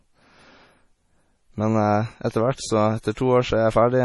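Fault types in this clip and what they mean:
MP3 compression: The speech sounds watery and swirly throughout, and s sounds carry a metallic chirp. Nothing is heard above 11.5 kHz, so the top of the treble is cut off flat. The damage is heavy, which fits a low bitrate around 32 kbps. The likely cause is an MP3 encoder short of bits, dropping weak frequency lines that flicker on and off between frames and smearing the onsets of sounds.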